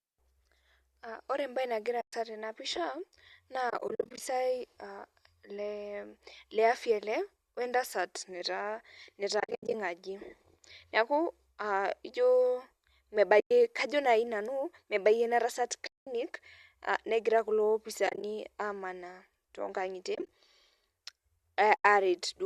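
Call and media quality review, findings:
AAC frame loss with muting at 2.01–2.13, 3.70–4.20, 9.40–9.74, 13.40–13.51, 15.87–16.07 (after "mebayie ina tasat"), 18.07–18.23, 20.15–20.29 and 21.76–21.85 s. Soft-edged holes. At 3.70 and 9.40 the holes are short and scattered, runs under about 70 ms. Lost frames are decoded as zero spectrum, and the overlapping windows fade the sound out and back in. The gap granularity fits 10 ms frames, likely a low-delay AAC-ELD stream. Check transport packet loss.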